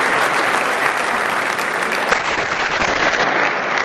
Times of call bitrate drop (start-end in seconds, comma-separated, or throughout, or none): 2.12-3.85